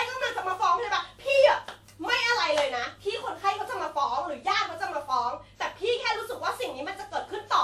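Speech clip with generation loss running the whole way through: the sound is swirly, smeared and hollow, with blurred consonant attacks, worse than a single 96 kbit/s WMA pass would give. That likely comes from being encoded around seven times over, each pass piling up fresh quantisation noise and spectral holes.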